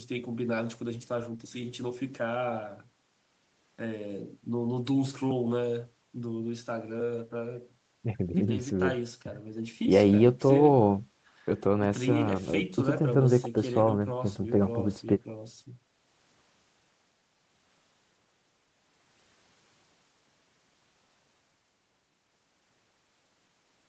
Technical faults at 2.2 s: none

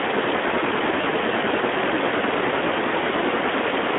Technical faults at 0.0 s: Speex codec

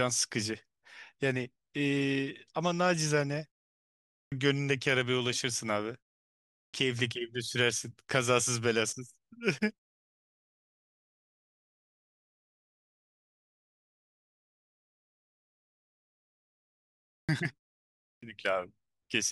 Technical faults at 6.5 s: clipped start after a pause

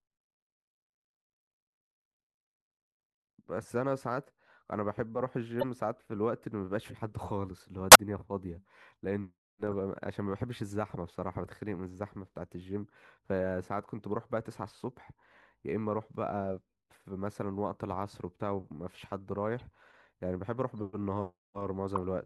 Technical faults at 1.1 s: none

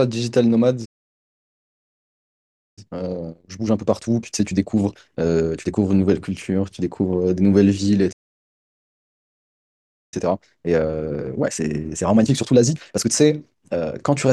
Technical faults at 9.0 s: playback stall

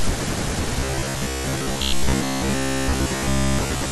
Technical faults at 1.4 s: robotic sound from repeated short buffers

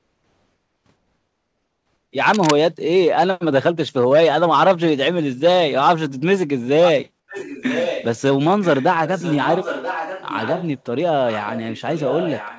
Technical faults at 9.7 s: echo leak

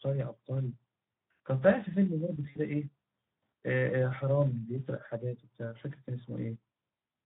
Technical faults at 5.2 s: Speex codec

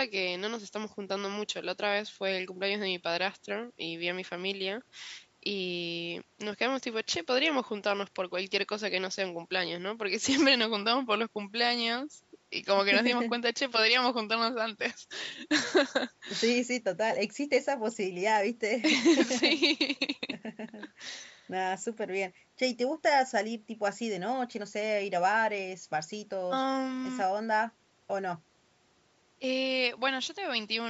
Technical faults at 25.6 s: none

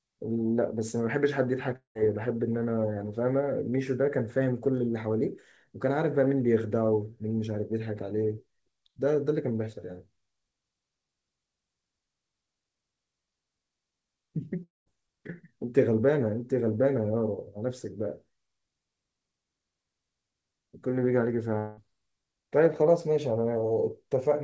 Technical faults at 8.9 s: none

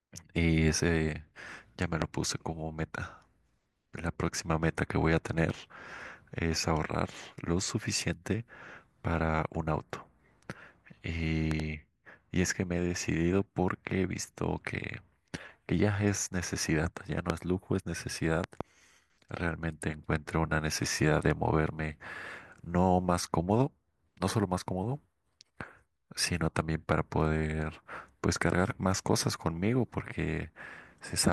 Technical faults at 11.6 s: loud pop

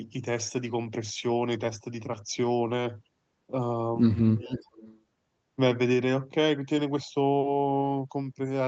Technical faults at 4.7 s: speech suppressed in double talk; echo leak

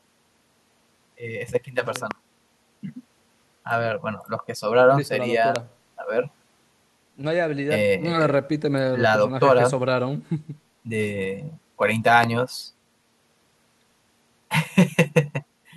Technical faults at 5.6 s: loud pop

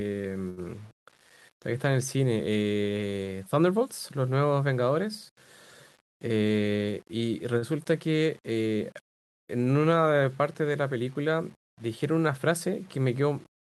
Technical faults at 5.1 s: low bit depth without dither

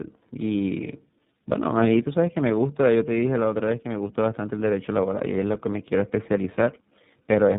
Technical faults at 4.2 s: tandem speech coding

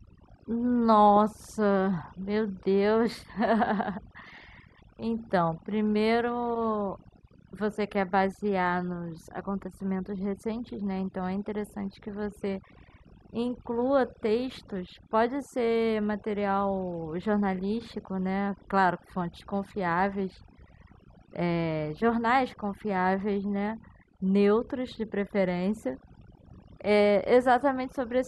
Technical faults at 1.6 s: overdone noise removal

